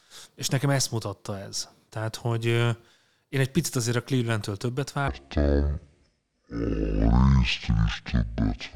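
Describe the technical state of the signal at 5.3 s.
At 5.3 s the speech sits inside a section at the wrong speed, running from 5.08 s to 8.75 s, where it plays at half speed, likely from being fitted to the wrong clock. It sounds deep and dragged, roughly ten semitones lower. On a spectrogram the harmonics and formants shift sharply downward and spread out in time; the waveform looks stretched.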